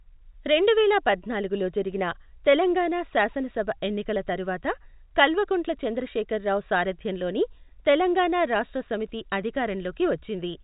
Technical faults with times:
none

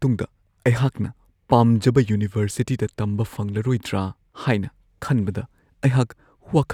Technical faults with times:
none

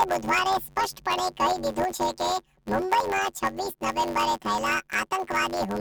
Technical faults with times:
0.00-5.81 planar audio read as interleaved

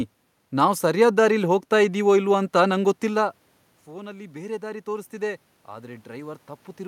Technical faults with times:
3.88-6.87 automatic gain rising

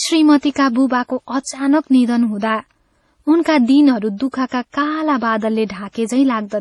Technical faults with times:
0.00-6.61 transcoding between lossy codecs

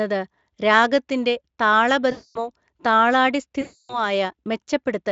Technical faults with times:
2.11-2.50 VoIP packet loss concealed by the speech codec
3.61-4.04 VoIP packet loss concealed by the speech codec

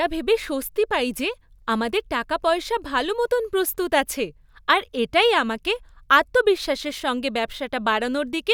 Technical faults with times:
none

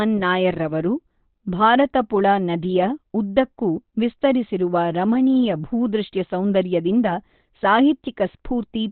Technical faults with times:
0.00-8.91 Opus compression

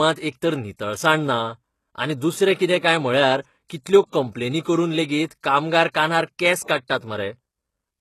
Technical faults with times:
0.00-8.00 HE-AAC compression
4.08-4.13 pre-echo
5.92-5.95 pre-echo
6.67 pre-echo

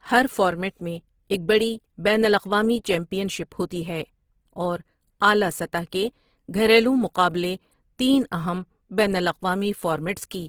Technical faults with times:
0.00-10.48 Opus compression

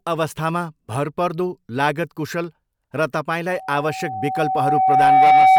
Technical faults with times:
3.51-5.59 loudspeaker feedback squeal

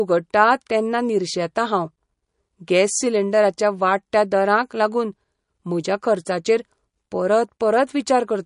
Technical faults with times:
0.00-8.45 MP3 compression

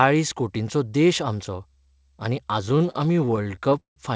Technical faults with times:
2.66-3.98 repeated stalls (stutter)

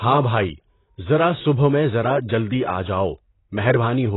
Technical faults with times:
0.00-4.16 AAC compression

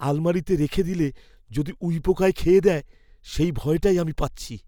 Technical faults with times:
2.28 dropped samples

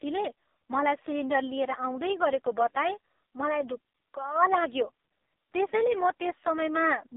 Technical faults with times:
0.00-7.16 AMR narrowband mobile codec

